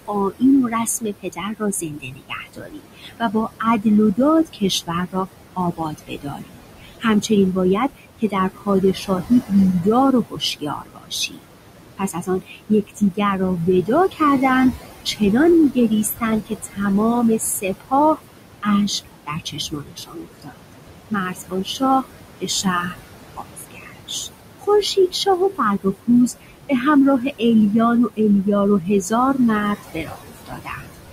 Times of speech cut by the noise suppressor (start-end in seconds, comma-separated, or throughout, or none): 0.08-16.81, 17.38-27.42, 28.09-30.91